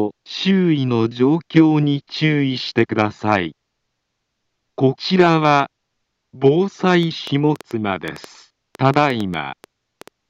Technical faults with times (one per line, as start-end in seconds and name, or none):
7.03-10.09 train of clicks